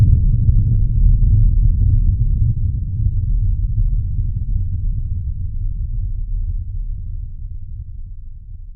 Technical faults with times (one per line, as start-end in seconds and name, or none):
3.82-3.89 DAB burbling